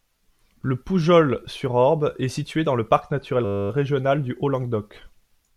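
From 3.45 to 3.7 s, after "dans le parc naturel", a system hang loop replays one 10 ms buffer 25 times, giving a steady 100 Hz buzz before "régional du".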